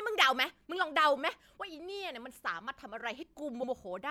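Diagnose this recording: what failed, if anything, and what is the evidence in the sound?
Repeated frames at 3.62 to 3.70 s, at the codec or storage stage. A stretch of about 78 ms of speech plays, then plays again immediately, producing a brief stutter near the end of the clip. A run of compressed frames was written or delivered twice, so the decoder reconstructed the same slice of audio back to back. That fits three frames of roughly 26 ms each. The duplicate adds 78.4 ms to the recording's length.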